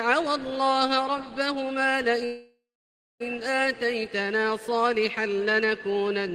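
A call audio freeze runs from 2.25 to 3.22 s. The last sound is stretched into a fading buzz, then about 0.57 s of silence. The audio resumes where it stopped, nothing lost but now about 0.95 s late. Likely cause: delayed packets emptying the jitter buffer.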